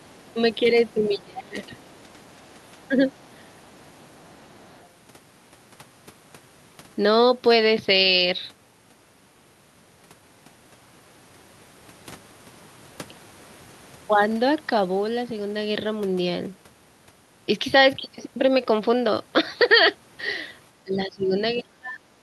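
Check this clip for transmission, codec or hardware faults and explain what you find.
Two echo-control faults appear in the speech, both concentrated in the first five seconds, with one more at the end.

Other side's voice leaking through occurs at 0.04–0.18 s, 0.93–1.18 s, 1.79–2.23 s and 3.09–4.85 s. A second, quieter voice sits under the talker, about 25 to 40 dB below the speech, loudest in the 0.93 s stretch. The likely cause is an echo canceller that did not fully remove loudspeaker playback from the microphone. On a spectrogram, faint harmonic traces appear that do not follow the main voice's pitch contours. The waveform shows little change.

Speech suppressed in double talk occurs at 1.08–1.66 s, 2.88–3.81 s and 20.84–22.0 s. Within each span the talker's level drops for a total of roughly half a second, 0.4 s and 0.7 s respectively, by up to about 25, 10 and 20 dB. The first two spans overlap the leaked voice, which suggests the canceller likely could not separate talker from echo and turned both down. 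On the waveform these show as sudden dips in the envelope, and on a spectrogram as energy fading across the band.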